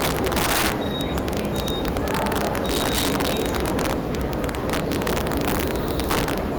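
Violent, sharp cracks burst out on the loudest peaks across the whole clip, far harsher than ordinary clipping. This is integer overflow: the signal was pushed about 11 dB too hot, and the small share of samples that exceeded the integer limit wrapped to the opposite sign instead of being held at the ceiling.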